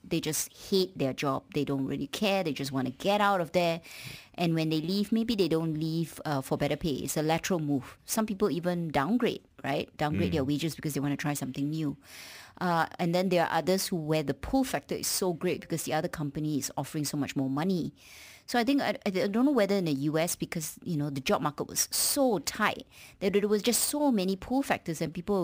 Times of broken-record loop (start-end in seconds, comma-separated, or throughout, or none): none